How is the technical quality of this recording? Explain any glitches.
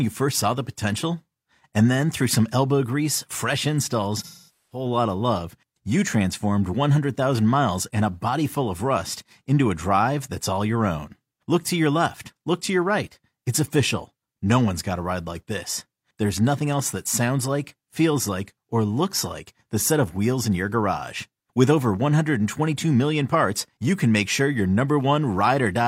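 The recording has one glitch, an AAC frame loss with concealment, between 4.17 and 4.85 s. About 0.47 s of coded audio went missing, which fits roughly eleven lost frames. The decoder covered the gap by reusing the last good spectrum with randomised phase and estimated energy, fading that substitute as the loss continued. The speech turns smeared and noisy, thins out over the half-second, and then returns when valid frames resume.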